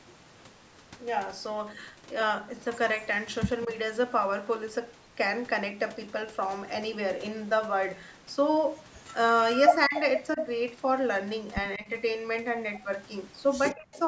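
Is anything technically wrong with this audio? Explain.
Yes, there are two problems.

Echo leak at 8.98–9.03, 9.53–10.0 and 13.72–13.99 s: you hear a copy of the speech trailing about 184 ms behind, faint at first and nearly as loud as the talker around 9.5 s. Likely the far end's echo canceller let some of its loudspeaker pickup back into the call.

Speech suppressed in double talk at 9.88–9.95, 10.35–10.39, 11.77–11.88 and 13.74–13.95 s: the talker's level dips briefly while the other side is playing on the loudspeaker, by about 5 to 15 dB and then roughly 40 dB at 13.7 s, which nearly cuts it out. Likely the canceller couldn't separate the talker from the echo and turned both down.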